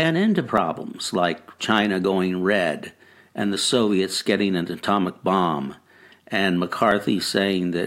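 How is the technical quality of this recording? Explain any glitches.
The speech has four small skips, each a jump in the sound, at 0.58 s, 2.04 s (right before "red and the"), 4.21 s (just ahead of "getting an atomic bomb") and 6.91 s (right after "an atomic bomb and"). They're likely dropped buffers (overrun). The program didn't grab its samples before the hardware overwrote them, so a chunk vanished and the two sides got butted together with no gap. Three lose just a few milliseconds. The one at 2.04 s loses about 20 ms.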